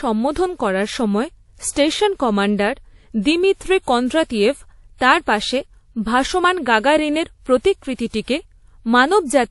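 Transcoding between lossy codecs is the likely cause of the degradation running throughout this speech clip. Nothing is heard above 11.3 kHz, and two layers of coding artefacts sit together in the sound. The pattern fits a low-bitrate MP3 encode, around 48 kbit/s, later re-encoded to WMA at about 64 kbit/s. The second codec spent its bits reproducing the first one's artefacts and added its own, while the lowest bandwidth ceiling in the chain carried through unchanged.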